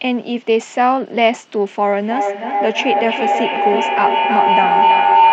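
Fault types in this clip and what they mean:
Bluetooth SBC bit pool drop: From 0.47 to 1.81 s the speech turns dull and gritty, which fits the bit pool falling from 31 to 11, near 83 kbps. Treble is lost and grainy noise rises, unlike clean band-limiting or dropouts.
Feedback howl: From 2.02 s to the end, a tone near 1 kHz builds, peaking about 4 dB above the speech, with the loop repeating about every third of a second. Unlike echo, the repeats grow rather than fade and narrow into a single ringing pitch.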